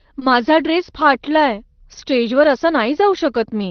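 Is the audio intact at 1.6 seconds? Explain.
Yes, at 1.6 seconds the speech plays through without any dropout, glitch or other fault.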